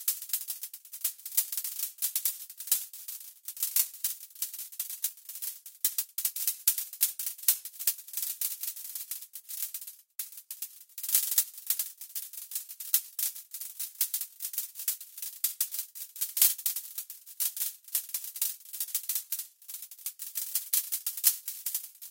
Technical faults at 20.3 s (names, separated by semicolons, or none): none